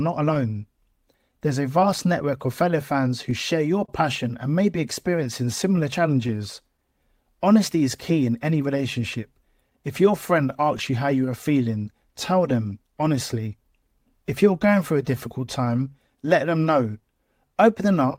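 Across the whole clip the speech carries a faint, recurring unsteadiness, as if the timing catches slightly now and then at uneven intervals. This is clock drift between sender and receiver. The sending side's clock runs roughly 2% slow relative to the receiver's, so the receiver's buffer keeps draining a little faster than it refills, and playback has to be nudged again and again to stay in step.

Between 0.34 and 1.82 s, about three tiny ticks or smears interrupt the speech, none longer than around 15 ms. These are scattered short gaps. A few packets went missing or arrived late, and the receiver covered each hole by briefly extending the preceding sound. Only a very small share of that stretch, around 2%, is patched this way, so the speech stays clear apart from those brief blemishes.

From 0.57 s through 17.49 s the tempo feels very slightly drawn out, with occasional soft hiccups. 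These are repeated timing corrections. To compensate for the slower sender, the receiver repeatedly stretches short pieces of audio, all in the same direction. Playback runs at about 99% speed, and roughly 150 ms is added over that span. Each individual edit is small and unevenly spaced.

From 3.85 to 3.89 s a sound is held a moment too long, with a slight buzz or dip. This is a short stall from a late packet. The packet was not there when due, so the buffer ran empty and the receiver sustained the last sound for 31 ms before resuming at the same point. Nothing is lost, but the delay grows by 31 ms.

The scattered short gaps return from 5.24 to 9.72 s, with about seven brief ticks or smears, and again from 10.77 to 15.68 s, with about ten. In each stretch the individual gaps are no longer than roughly 15 ms, and about 70 ms in total is filled by extending the preceding sound.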